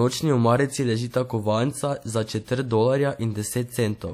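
Throughout, the speech was likely squeezed by low-bitrate WMA compression, fitting about 48 kbps. Smeared quantisation noise leaves a ringing, washy hiss, with nothing above 18.1 kHz.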